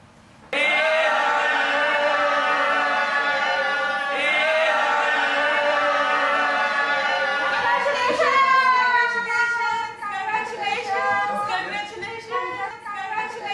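Listening across the whole clip reveals no technical fault in the audio signal.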